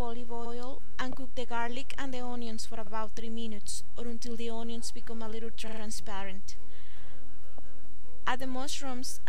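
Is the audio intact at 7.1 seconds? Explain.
No. Repeated frames: the block from 7.06 to 7.13 s, about 70 ms, is decoded twice, causing a brief stutter and adding 69.7 ms.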